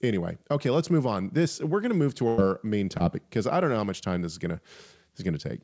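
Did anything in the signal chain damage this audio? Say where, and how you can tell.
Yes, the damage happened on the network leg of the call. From 2.28 to 2.40 s the speech stops and the last sound is held as a buzz or hiss that fades out. The speech then picks up a little further along. That is a burst of packet loss. About 100 ms of audio never arrived in time, and the receiver filled almost all of it by stretching and fading the last good sound instead of playing what was actually sent.

A second, much shorter glitch occurs between 2.98 and 3.02 s. It is a brief smear or wobble, and a small bit of the sound may drop out. This is short concealed packet loss. Roughly 20 ms failed to reach the decoder, so the receiver continued the preceding sound for that moment and blended it back into the real signal. This happened on the same call path, where everything above 8 kHz is absent, which fits a wideband call codec such as G.722.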